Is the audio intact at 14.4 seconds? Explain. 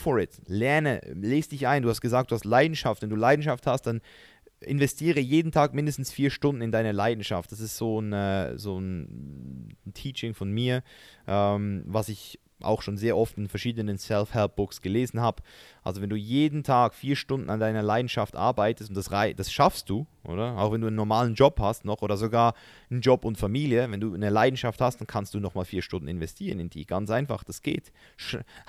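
Yes, at 14.4 seconds the speech plays through cleanly, with no dropout, click, distortion or other fault to be heard at that moment.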